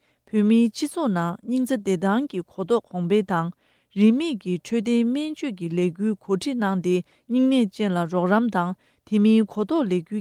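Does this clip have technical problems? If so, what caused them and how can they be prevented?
No, there's nothing technically wrong to hear anywhere in this one, so there's nothing here that needs preventing.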